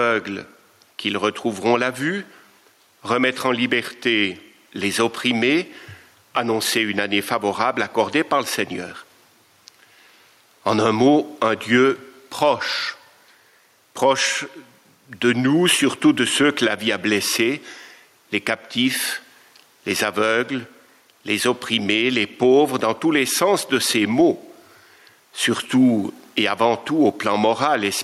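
Gain pumping throughout: the level ducks about 5 dB under loud sounds, likely from excess gain into a fast limiter; unlike gating, never silent.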